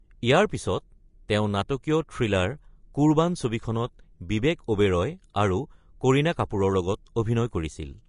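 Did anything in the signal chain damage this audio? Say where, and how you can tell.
Yes: the speech sounds hissy and grainy throughout, with nothing above 10.5 kHz. This is likely Vorbis compression at the codec stage, coarse treble quantisation fitting about 36 kbps.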